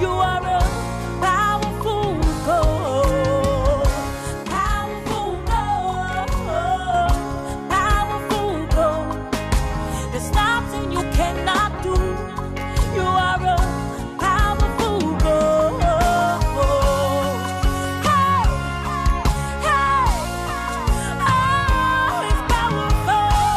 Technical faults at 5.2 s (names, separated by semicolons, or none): channel delay (doubling)